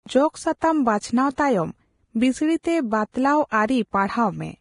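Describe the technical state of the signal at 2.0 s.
Vorbis compression is present at 2.0 s, as it is across the whole clip. The sound is hissy and grainy, with nothing above 10.5 kHz and a coarse, noisy treble, likely from a low-quality Vorbis encode at a bitrate near 30 kbps. The encoder keeps a smooth spectral outline but quantises the upper detail so roughly that it turns into noise of similar energy, roughening tones and softening the onsets of the speech.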